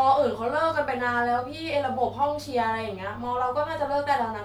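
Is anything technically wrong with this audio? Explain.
No, nothing technically wrong can be heard here.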